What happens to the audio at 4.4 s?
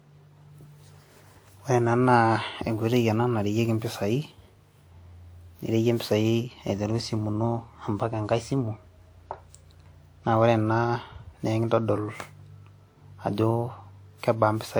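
At 4.4 s the speech carries generation loss, present through the whole clip, likely from re-encoding about seven times with a WMA-type codec near 96 kbit/s. It sounds swirly and hollow with blurred attacks; a spectrogram shows scattered spectral holes and smeared onsets, with content up to about 20.1 kHz.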